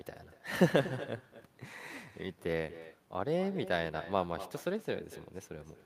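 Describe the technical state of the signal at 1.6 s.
Echo with no canceller is present at 1.6 s, as it is throughout the clip. The far end's loudspeaker feeds its microphone unchecked, so the speech returns roughly a fifth of a second later, about 14 dB quieter, as a thinner copy.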